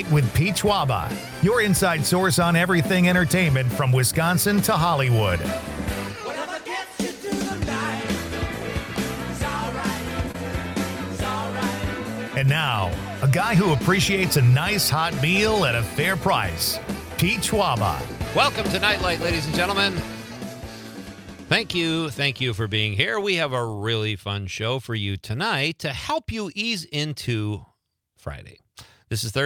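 At 10.31 to 10.35 s a packet arrives late and the jitter buffer runs dry, giving a short stall from a late packet: the receiver stretches the last sound for about 29 ms, then resumes where it left off, so nothing is lost but the sound briefly hangs with a faint buzz or dip.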